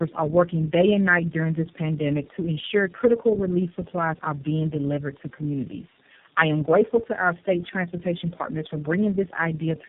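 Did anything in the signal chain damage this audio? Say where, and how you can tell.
Yes. The damage happens at the codec stage, through tandem speech coding, and it runs through the entire clip. The speech is rough, muffled and warbly, with nothing above 3.7 kHz. That combination fits about three low-rate speech coders in series, much like a G.729A, AMR-NB and iLBC chain joined by G.711 links. At each border the call is decoded and then coded again, so every stage models the previous stage's errors, and the artefacts compound.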